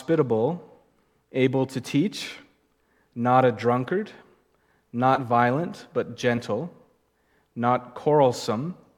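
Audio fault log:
5.15–5.20 s, 6.37–6.39 s and 7.97 s, compressed frames skipped: the sound jumps ahead by about 40, 40 and 20 ms, matching whole 10 ms frames going missing or being rejected.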